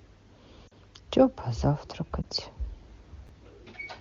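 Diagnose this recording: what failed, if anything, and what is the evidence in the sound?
Network stage: lost AMR speech frames on the AMR-WB link. At 0.67–0.73 s the decoder concealed what fits two 20 ms frames, and at 2.22–2.25 s one, giving a drop to near silence and then a brief dip.

Buffer stage: chunks out of order. A 10 ms chunk played one chunk late around 3.27–3.29 s, producing a jumbled instant with three hard joins.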